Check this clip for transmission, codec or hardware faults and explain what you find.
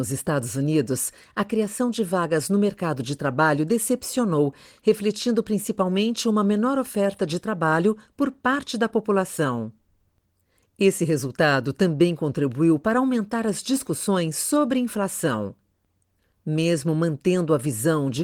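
No transmission, codec or hardware faults are audible here.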